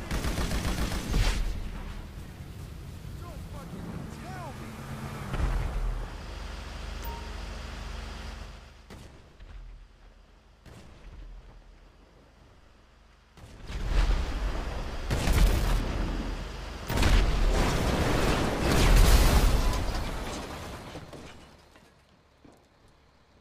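At 13.61 s there's a bit of zipper noise lasting until about 13.98 s. The level gets pulled through roughly 20 dB, but in hard 3 dB jumps instead of a glide, around twenty of them a second. Every jump leaves a small click, so you hear a quick ticking zip riding on the sound while the level moves.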